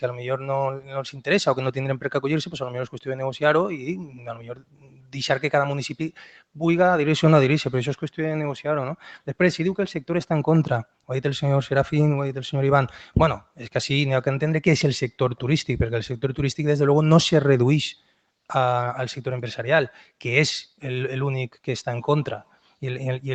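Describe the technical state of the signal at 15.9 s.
At 15.9 s a speech-oriented noise suppressor is still active, as it is throughout the clip. It treats sustained tones and decaying tails as noise, pulling them down by roughly 5 dB while onsets pass, so the sound pumps and thins against the call path's 8 kHz ceiling.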